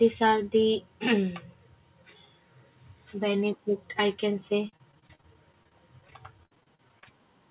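From 4.65 s to 7.07 s, repeated packet loss leaves many short holes, the longest 56 ms. Concealment stretches prior sound over roughly a fifth of that span, so the speech turns choppy and robotic. Throughout, the call path's narrowband coding leaves nothing above 4 kHz, which fits a telephone-grade codec such as G.711.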